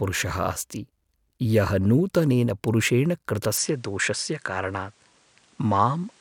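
An input switched to a poorer device from 3.58 s to the end of the speech. The sound changes abruptly there, with no gap and no real jump in loudness: everything above 10.5 kHz disappears, leaving the top end duller, and a new, faint noise floor, roughly 35 dB under the speech, comes in. That change of bandwidth and background mid-recording is most likely the system moving to a different microphone.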